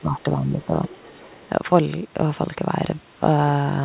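From 0 to 0.75 s the speech dips repeatedly, by around 10 dB at its deepest, for roughly half a second in total, with pieces thinning or dropping out. This is speech suppressed in double talk. The echo canceller was likely confused by both sides talking at once and pulled down the near talker along with the echo. Unlike the steady loss of everything above 4 kHz, which fits a narrowband telephone codec, these dips come and go and take whole chunks of level.

From 0.88 to 1.0 s a faint second voice sits under the speech, about 20 dB down. This is the other side's voice leaking through, likely residual loudspeaker echo the canceller missed. What separates it from suppression is that something is added rather than taken away. A separate voice appears instead of the main speech weakening.

From 1.19 to 1.36 s the speech is suppressed again, briefly, for roughly a tenth of a second, again dropping around 10 dB.

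From 1.42 to 1.49 s another scrap of the other side leaks in, fainter still at about 30 dB below the speech.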